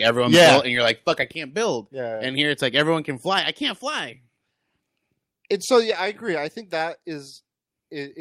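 From 0.06 to 0.57 s the speech shows microphone overload: peaks run about 13 dB past the converter's limit, with roughly 15 percent of samples flattened, giving a harsh, crackly edge. The likely cause is input gain set too high for the converter. Partway through, at 0.35 s, the level drops by about 3 dB in one step, then by about 7 dB more at 1.35 s. This is the microphone volume stepped down, likely by call software reacting to the clipping, and voice and background fall together. A brief, milder overload at 5.74 to 5.79 s, about 1 dB over with roughly 3 percent clipped, adds crackle, likely from peaks still reaching the converter ceiling. It is followed at 5.91 s by another step down of about 5 dB.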